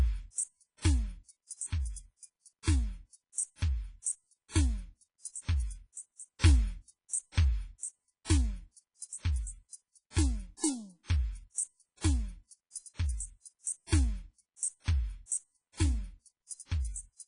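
From start to end the music carries heavy transform-codec damage, most likely WMA compression at a low bitrate, with the sound pointing to something around 24 kbps. Content above about 10.1 kHz is missing, so the top end is cut off flat. The quantisation noise is smeared over long blocks, giving a ringing, washy texture around transients and a hiss that swells and recedes with the level of the music, while quieter details drop out.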